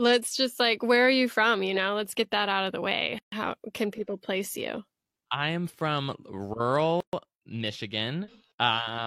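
A gap at a join of encoded pieces opens at 3.18 s, just after "out of the way", lasting 139 ms, and again at 7.00 s for 126 ms. The speech was encoded in separate chunks and spliced untrimmed, so each chunk's start delay and end-frame padding leave silence with smeared edges before the speech resumes where it stopped.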